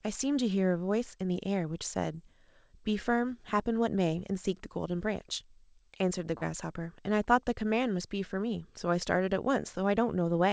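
Brief smeared wobbles at 2.12 to 2.15 s and 6.37 to 6.43 s are short concealed packet loss: about 20 ms and 40 ms of audio never arrived in time, so the decoder extended the preceding sound before blending back. The audio carries the G.722 call codec's band limit, with nothing above 8 kHz.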